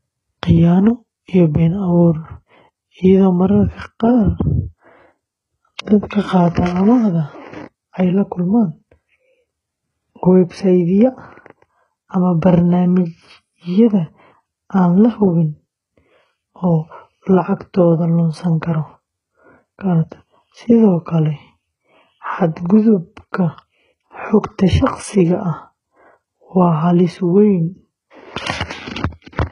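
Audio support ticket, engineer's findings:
Sibilants gritty and metallic, lispy s sounds across the whole speech clip; treble bright but synthetic, harmonics not lining up above the crossover; hard ceiling at 11 kHz. Likely HE-AAC compression, heavy damage: spectral band replication copying lower bands upward under a coarse envelope. Degree of damage fits a very low bitrate, around 12 kbps.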